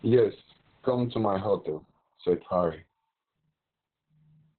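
The speech carries heavy Opus voice compression throughout. SILK's narrowband coding leaves nothing above about 4.2 kHz, so the voice sounds muffled, hoarse and faintly robotic, consistent with roughly 6 kbps. A spectrogram shows a hard ceiling at 4.2 kHz with smeared, coarse harmonics beneath it.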